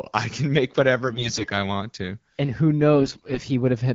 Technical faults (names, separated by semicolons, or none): AMR bit errors